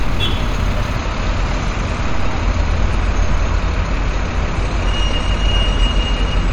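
At 0.97 s the sound abruptly turns dull and swirly, with nothing above 11 kHz, and stays that way to the end. This is an adaptive stream at a lower bitrate: a slowed connection switched playback to a cheaper MP3 encoding, which fits a drop from 128 to 48 kbit/s.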